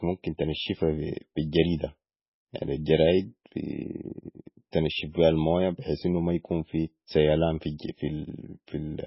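MP3 compression throughout this speech: nothing above 5.5 kHz, with heavy watery, swirly artefacts, likely from an encoder starved of bits, fitting roughly 16 kbps.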